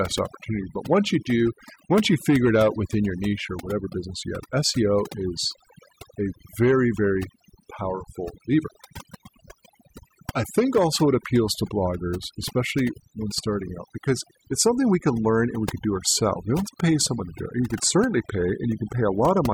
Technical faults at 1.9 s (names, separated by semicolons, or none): overdone noise removal